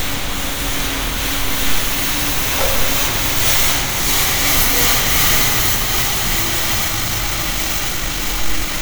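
At 6.82 s the pace jumps. From there to the end, around 8.81 s, the audio runs about 1.49 times faster than before. The pitch does not rise with it. This is a time-stretched section. Software likely squeezed this stretch to fit a shorter length, dropping short slices of audio to keep the pitch steady. The sound turns rushed.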